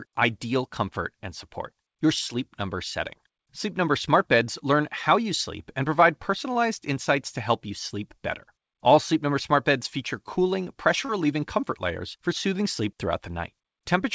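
At 6.53 to 6.58 s there is a short stall from a late packet. A packet arrived late and the jitter buffer ran dry. The receiver held the last sound for about 24 ms, then resumed at the same point. Nothing is lost. The sound is simply held too long, with a buzz or a dip.

At 11.05 to 11.12 s comes a short concealed packet loss. About 30 ms of audio never reached the decoder. The receiver bridged the gap with 32 ms of sound extended from what came before, then blended back into the real audio. It is heard as a brief smear or wobble. A short sound such as a consonant can vanish. Through both events, the call path's band limit at 8 kHz, consistent with G.722, can be heard.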